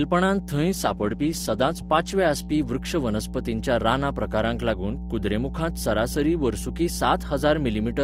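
A steady mains hum runs under the whole speech clip, a low 60 Hz drone with a few low harmonics, sitting only a little below the voice. Something like a ground loop or nearby transformer is leaking the power line straight into the signal.

From 0.58 to 2.18 s there's a call bitrate drop: the encoder gets squeezed from 32 down to 13 kbps, bottoming out for about 1.5 s. The speech goes rough and watery, with the top end dulled, until the rate climbs back.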